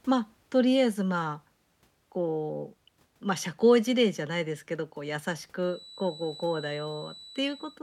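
From 5.56 s to the end of the speech, a feedback whistle sits behind the sound: a thin, steady tone at 4 kHz, roughly 20 dB below the signal, swelling and fading slowly in level. It is likely a loudspeaker-to-microphone loop held just at the edge of feedback, sustaining one frequency without building up.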